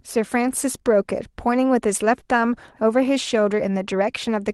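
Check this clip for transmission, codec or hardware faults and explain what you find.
One transmission fault is audible: a short concealed packet loss at 2.19 to 2.23 s. About 20 ms of the call's audio arrived too late for the decoder, so the receiver extended the preceding sound to cover the gap and then crossfaded back into the real signal. The result is a brief smear or wobble in the speech; separately, the Opus call path limits the top end to about 12 kHz throughout.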